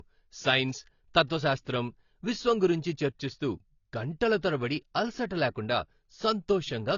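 Speech, likely low-bitrate audio saved at a high bitrate as MP3: the earlier coarse encoding survives, leaving nothing above 7 kHz throughout.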